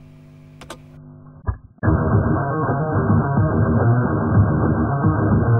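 At 0.97 s the audio switches abruptly, with no gap, to an adaptive stream at a lower bitrate: nothing remains above about 1.7 kHz and codec artefacts swell through to the end, which fits a drop to a very low AAC rate. The seamless switch rules out a dropout.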